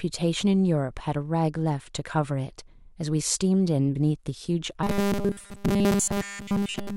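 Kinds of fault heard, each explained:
Robotic sound from repeated short buffers: from 4.83 s the speech locks into a rigid 200 Hz metallic buzz, likely from a 5 ms buffer looping throughout, unlike a drifting warble.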